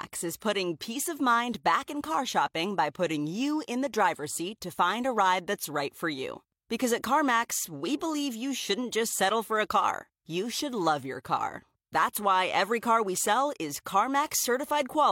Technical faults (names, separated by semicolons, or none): none